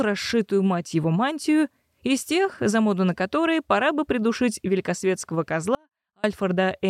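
At 5.75 s the sound drops abruptly to a faint residue, roughly 35 dB below its normal level, for about 490 ms before snapping back at 6.24 s. This audio dropout likely reflects a signal break with the downstream path still live. On a waveform it shows as a sudden near-flat stretch; on a spectrogram, a dim vertical band with hard edges.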